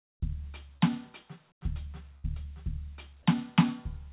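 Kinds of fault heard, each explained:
short concealed packet loss: Around 0.77 s, about 30 ms of the music arrived too late, so the receiver stretched the previous sound over the gap, leaving a brief smear.
comfort noise in place of the background: From 1.52 to 1.61 s, the background becomes flat, featureless hiss about 15 dB quieter, likely synthetic noise filling a paused transmission.
burst of packet loss: Between 2.18 and 2.27 s, roughly 60 ms went missing; the last sound is held and fades out, then the music resumes further along.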